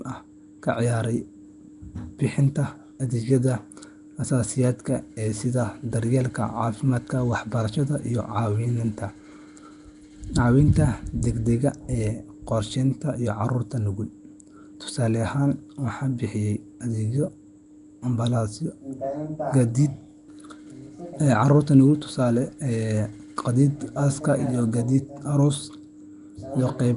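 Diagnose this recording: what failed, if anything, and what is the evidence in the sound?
The codec stage failed: the speech carries a rough, hissy halo and a smeared, underwater quality throughout, with nothing above 10.6 kHz, which fits likely Nellymoser compression at around 44 kbps. Weak bands starved of bits are refilled with noise, so the hiss tracks the speech rather than sitting steady like tape or line noise.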